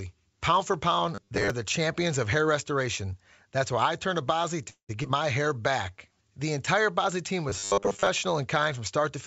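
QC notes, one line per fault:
1.15–1.50 s and 7.50–8.07 s, robotic sound from repeated short buffers: a rigid 100 Hz metallic buzz, likely from 10 ms chunks being looped, first between "for pound" and "the champions of hair".
4.70–4.91 s, call audio freeze: sound stalls for about 190 ms, a fading fill then roughly 100 ms of silence, likely a starved jitter buffer; nothing's lost, it just runs later.
5.03 s, skip ahead: about 70 ms of audio drops out and the two sides are butted together with only a brief fill, so it lurches forward.
5.42–6.14 s, jitter buffer slow-down: playback stretches to about 90% speed, 81 ms added by repeating pitch periods, so sounds drag without any pitch change.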